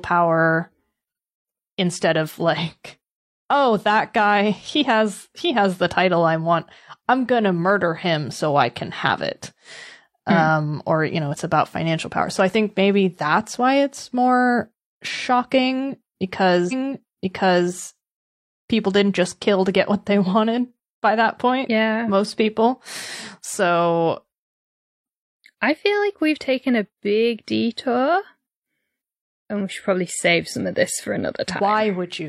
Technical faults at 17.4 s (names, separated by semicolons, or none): stream segment repeated